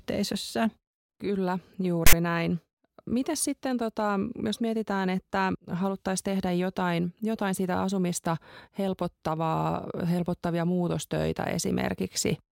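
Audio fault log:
2.07–2.13 s, file tags played as audio: a block of text metadata in the file was handed to the decoder as if it were sample data, so for about 60 ms the playback reads letters and formatting bytes as waveform values. Because text bytes cluster in a narrow range, the result is a loud, harsh rasp pushed off-centre towards one side of zero rather than balanced noise, and it starts and stops abruptly, cutting a burst of static with hard edges into the speech.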